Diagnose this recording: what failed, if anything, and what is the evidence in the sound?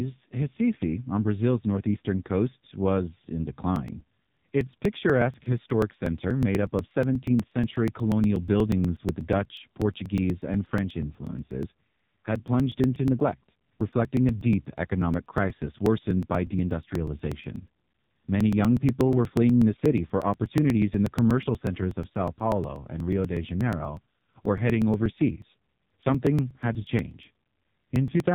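The whole clip has gone through the AMR narrowband mobile codec, at the codec stage. Nothing gets through above 3.8 kHz, so the speech sounds boxed-in, like an old phone call. It's also heavily damaged: buzzy, synthetic vowels, which fits the low 5.9 kbps AMR-NB mode. At that rate the vocal-tract model gets only a few pulses per subframe, so the excitation is too coarse to sound natural.

Then there are periodic USB or driver dropouts at the driver or buffer stage. They start at 3.76 s, right after "northeastern coast was in", and run to 28.20 s. A tick lands every 0.121 s, about eight a second, and there are around two hundred in all. Each one is a few milliseconds of audio skipped outright rather than silenced. That points to something stalling the bus or driver on a fixed schedule, so chunks of samples never make it into the stream.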